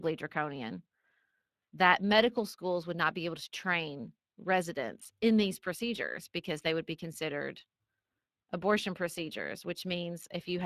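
From the first second to the end, the speech carries plainly audible Speex codec damage. This CELP coder spends too few bits on the excitation, so voiced sounds come out hoarse with a grainy, noisy edge, which fits a setting near 22 kbps. Unlike transform codecs such as MP3, it leaves no warbly, swirling artefacts. The roughness sits in the voicing itself, and the content still reaches up to about 15.3 kHz, where the band stops cleanly.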